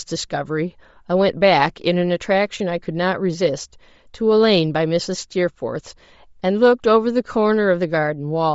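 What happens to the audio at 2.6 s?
At 2.58 s, lost LE Audio frames cause a brief gap of about 15 ms, which fits two dropped 7.5 ms frames. The decoder repeats the last spectrum with random signs, so the speech smears into a short noisy blur. The speech around it has a breathy, grainy edge, plainly audible, with the upper band thinned and noise-filled, likely from Bluetooth LC3 compression at a low bitrate.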